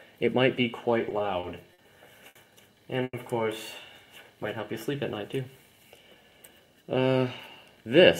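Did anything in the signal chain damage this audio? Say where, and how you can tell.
Yes. Repeated stalls (stutter) at 1.09 to 1.80 s: four network jitter-buffer gaps, 100 ms of held sound in total, longest 50 ms. Nothing is lost, unlike dropouts.

A short stall from a late packet at 2.28 to 2.37 s holds the sound 70 ms, then resumes in place. It is a single event, not a recurring pattern.

At 3.03 to 3.15 s the sound is continued for 100 ms, ending in 30 ms of silence. This is likely a call audio freeze from delayed network packets. The fade to silence sets it apart from a brief stall.

A jitter buffer speed-up at 5.85 to 6.63 s trims about 70 ms. It runs at 109% speed with the pitch unchanged, which rules out resampling.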